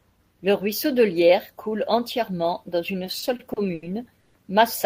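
Right after "coule entièrement dans une", from 3.05 to 3.84 s, the speech runs into repeated stalls, a proper stutter. Packets were reaching the receiver late, so its jitter buffer kept draining, and six times it had to stretch the last bit of sound to cover the hole, about 190 ms in all, the longest around 80 ms. Roughly a quarter of that stretch is filler, yet nothing's actually lost. It just drags and hiccups along.

Then at 4.20 to 4.36 s there's a short call audio freeze. The sound hangs for about 140 ms, carried on as a buzz or hiss rather than dropping into silence, and then picks up exactly where it left off. That's likely the packets getting held up in transit and the buffer running dry once more. No audio goes missing, but everything after it lands about 140 ms later than it should.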